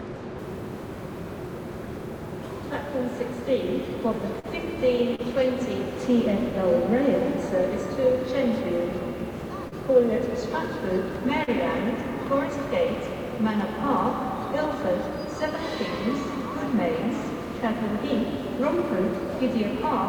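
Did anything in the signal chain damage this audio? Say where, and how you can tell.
Yes, two stages left marks. From 0.39 s to the very end there's a grainy error riding on the sound, sitting roughly 35 dB under it, and it moves with the signal rather than sitting still like ordinary hiss. That's low bit depth without dither, most likely a sample-format conversion that rounded the audio down to 8 bits with no dither, so the rounding error stays tied to the waveform instead of being turned into neutral noise.

The second problem is on the network side: short concealed packet loss at 4.39 to 4.46 s, 5.15 to 5.21 s, 9.68 to 9.75 s and 11.44 to 11.50 s. Each time about 40 ms of audio never arrived, and the receiver patched over it with roughly 31 to 41 ms of synthesized continuation before fading back into the real signal. That's why you hear a brief smear or wobble at each of those four points.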